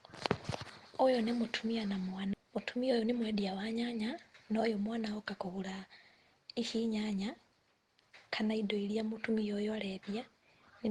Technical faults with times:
2.33-2.35 skip ahead
2.43-3.84 jitter buffer speed-up

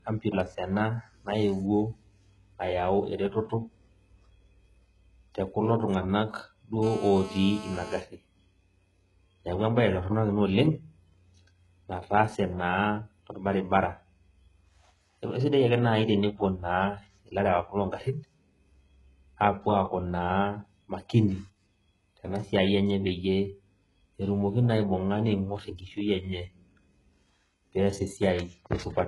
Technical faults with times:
0.00-29.08 low-bitrate audio saved at a high bitrate
6.83-8.00 GSM phone buzz

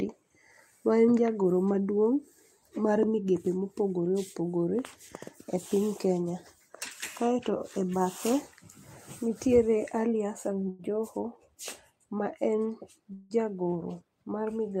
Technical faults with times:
10.69-10.82 short stall from a late packet
13.14-13.33 call audio freeze

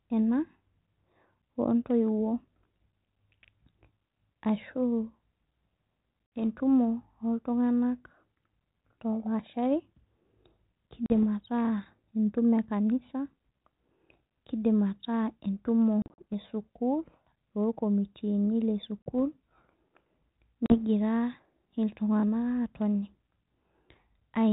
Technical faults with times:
6.26-6.40 packet loss on an ADPCM call
11.06-11.24 packet loss on an ADPCM call
16.02-16.23 packet loss on an ADPCM call
19.02-19.12 packet loss on an ADPCM call
20.66-20.78 packet loss on an ADPCM call

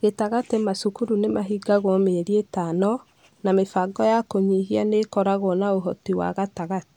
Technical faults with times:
none

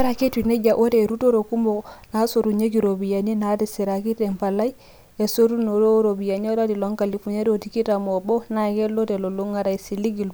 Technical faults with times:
none

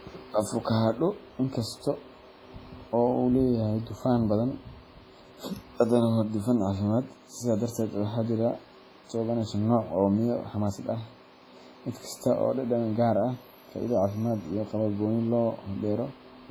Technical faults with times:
0.00-16.51 WMA compression

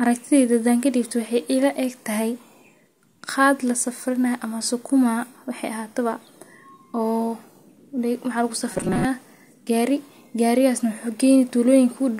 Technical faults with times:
8.72-9.05 robotic sound from repeated short buffers

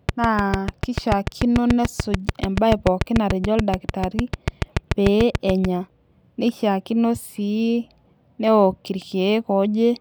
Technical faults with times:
0.09-5.66 train of clicks

